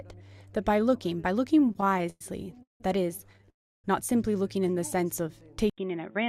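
Packets reaching the receiver late and unevenly drained the jitter buffer over and over, causing repeated stalls (stutter). Between 1.65 and 2.81 s the audio halts fifteen times, with the longest hold 172 ms and about 406 ms added in all. Between 3.33 and 3.48 s there are four brief hitches totalling 40 ms. Each stall extends the last sound, so the audio drags and stumbles. Nothing is lost, only delayed. A call audio freeze follows from 3.50 to 3.85 s, likely caused by packets held up in transit. The last sound is carried on briefly and then fades, leaving about 310 ms of silence. Playback resumes where it stopped, so 340 ms of gap has been inserted. At 5.70 s the input likely switches to a poorer device through to the end. After an 80 ms silence at the switch, the sound turns dull, drops about 5 dB in level, and carries a faint new noise floor roughly 50 dB down.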